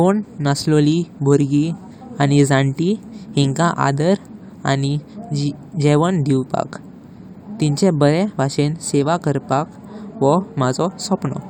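Speech, with no audible technical fault anywhere in the recording.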